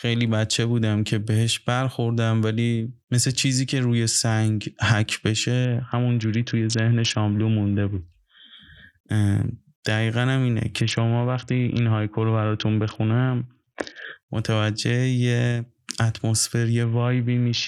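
At 5.65–8.02 s, 10.81–14.05 s and 16.83 s to the end, a Bluetooth SBC bit pool drop dulls the speech's treble and adds gritty quantisation noise, consistent with roughly 60 kbps.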